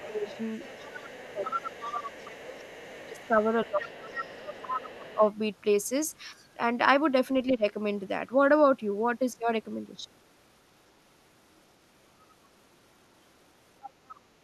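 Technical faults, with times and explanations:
0.0–2.4 s, 2.76–3.46 s, 3.79–5.15 s and 13.82–14.16 s: other side's voice leaking through. A second voice sits beneath the talker, about 10 to 25 dB down and strongest near 4 s. This is likely loudspeaker sound the echo canceller failed to remove. It adds a voice rather than removing one.
0.09–5.22 s and 7.5–7.64 s: speech suppressed in double talk. The talker's own level sinks by as much as about 20 dB over roughly four seconds of the first span, with a brief dip of about 15 dB at 7.5 s. This is likely the echo canceller ducking both voices together. Here the wanted voice drops away instead of an extra voice appearing.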